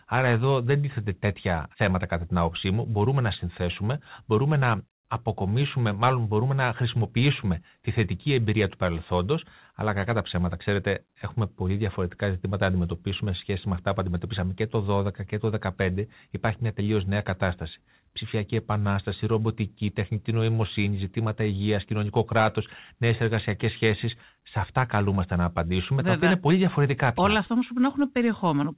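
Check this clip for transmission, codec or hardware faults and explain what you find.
Nothing here sounds amiss: the speech comes through with the narrow, telephone-like band you'd expect from a G.711 mu-law call path, with nothing above 4 kHz, which fits a 64 kbps link doing its normal job.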